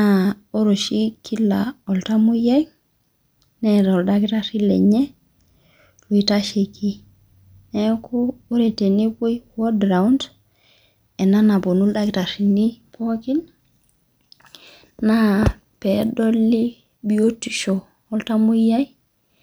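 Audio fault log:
Nothing stood out on listening to the speech.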